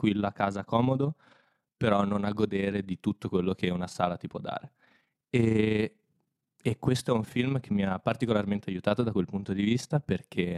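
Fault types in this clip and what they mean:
overlap-add ripple: windowed frames were rejoined with overlaps that don't sum evenly, so the level dips about 6 dB roughly thirty times a second, giving the speech a rough flutter throughout.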